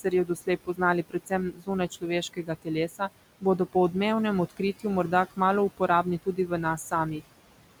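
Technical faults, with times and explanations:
Throughout: noise suppressor artifacts. The room noise, about 17 dB below the speech, is pulled down by about 18 dB between words. It returns under speech, so the background pumps.
0.04–3.01 s, 4.49–4.85 s (after "po odmevnem", before "morda kmalu"), 5.77–6.51 s (after "morda kmalu"): speech cut by the noise suppressor. Quiet speech was treated as noise and dropped up to about 18 dB. Roughly 0.7 s, 0.1 s and 0.2 s in total sound swallowed.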